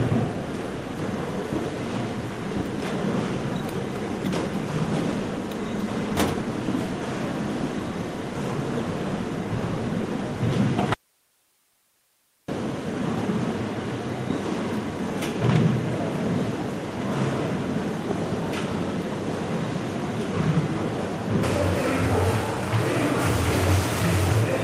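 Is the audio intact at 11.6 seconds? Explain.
No. From 10.94 to 12.48 s an audio dropout to a faint residue cuts the sound abruptly for about 1.5 s, likely because the signal was lost while the path stayed live. Only hiss remains, about 40 dB down, shown as a near-flat waveform and a faint uniform spectrogram band.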